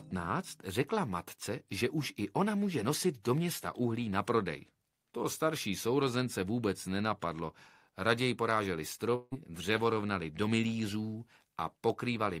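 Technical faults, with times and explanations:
9.15 to 9.34 s, long network dropout. The sound breaks off at 9.15 s. For about 160 ms, a buzzy continuation of the last sound fills the gap and fades away. About 20 ms of silence follows. The audio then resumes, but 160 ms of the original is missing, so it picks up further along than where it stopped. This is likely a run of lost packets, with the receiver covering the gap by extending what it last received.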